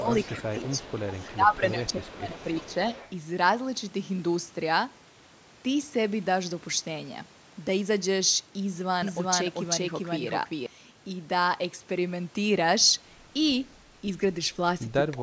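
Speech suppressed in double talk runs from 0.0 to 0.95 s and again from 1.3 to 2.91 s. The sound dips by roughly 10 dB in the first stretch and nearer 15 dB in the second, with about 0.4 s and then about a second of sound pulled down in patches. The likely cause is an echo canceller that heard both ends talking at once, could not separate the local talker from its own loudspeaker echo, and turned both down together.

Echo leak overlaps those stretches, from 0.18 to 1.29 s and from 1.84 to 3.14 s. A faint copy of the sound trails 341 ms behind, about 20 dB under the main signal. It most likely comes from one side playing the call on a loudspeaker, where the echo canceller let part of what its microphone picked up slip back down the line.

A doubled audio track appears from 9.02 to 10.66 s. A full-band second copy, about as loud as the original, runs roughly 400 ms late with no decay or room colouring. 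It switches on and off abruptly at both edges, which points to the same audio likely being mixed in twice out of step.

At 15.13 s, right at the end, a final brief burst of double-talk suppression pulls the sound down by roughly 20 dB for about 0.1 s.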